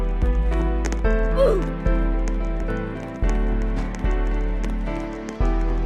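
Nothing in this one stands out as a technical fault; there's no glitch, dropout or distortion to point to anywhere in the audio.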